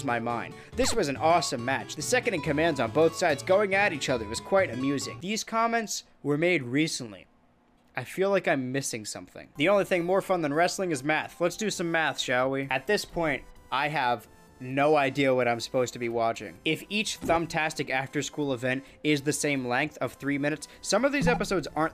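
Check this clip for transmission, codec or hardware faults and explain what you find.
There's one fault here: GSM phone buzz from about 2.46 to 3.55 s. A 2G handset close to the gear was keying its transmitter in bursts roughly 217 times a second, and something in the audio path rectified those radio pulses into audible signal. You get a hard, raspy buzz at about 217 Hz, full of harmonics and unrelated to the sound itself. It sits about 23 dB below the signal and stays nearly steady, which fits a phone in an active call.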